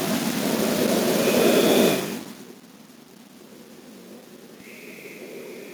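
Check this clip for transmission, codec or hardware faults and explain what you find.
Nothing in the system itself sounds at fault here.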